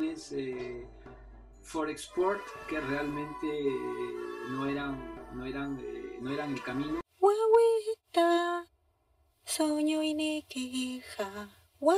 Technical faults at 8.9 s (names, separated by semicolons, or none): channel delay (comb filtering)